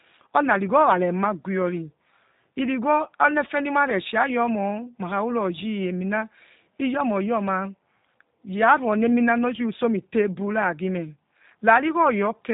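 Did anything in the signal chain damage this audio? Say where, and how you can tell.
Yes. G.729 codec damage runs throughout the speech, at the codec stage: nothing survives above 3.8 kHz, and the voice sounds rough and synthetic, which fits an 8 kbit/s G.729 coder rebuilding each 10 ms frame from a vocal tract filter, pitch predictor and sparse pulses.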